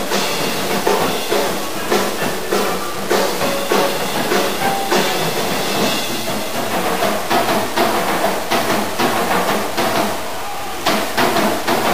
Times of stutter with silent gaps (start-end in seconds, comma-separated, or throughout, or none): none